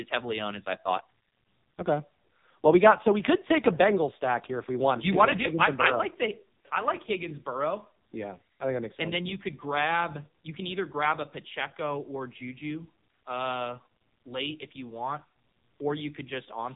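An AMR narrowband mobile codec fault runs through the whole of this speech clip, from start to finish. Nothing above about 3.8 kHz survives, so the sound is boxed into a thin telephone band. The heavy damage points to a low bitrate of around 5.9 kbps. At that rate the vocal-tract model is fed too few pulses per frame, leaving the speech buzzy, metallic and noticeably synthetic.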